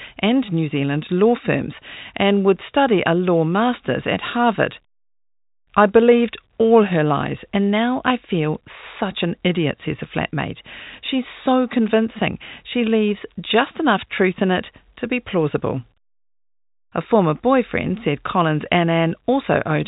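No faults heard in the speech: the telephone-band G.711 coding sounds as expected, with nothing above 4 kHz and only the faint level-tracking quantisation noise that format carries.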